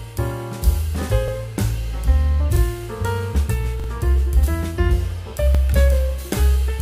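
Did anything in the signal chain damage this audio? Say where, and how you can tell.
Yes, at the driver or buffer stage, as a repeated buffer. At 1.28, 2.56 and 5.55 s a slice of about 43 ms plays twice, and at 3.80 s it plays three times, running to 3.88 s, each repeat starting on a hard join. The slice length fits a 2048-sample buffer. Fresh audio arrived late, so the last block was replayed. Unlike a dropout, nothing goes silent or missing; the same sound simply stutters.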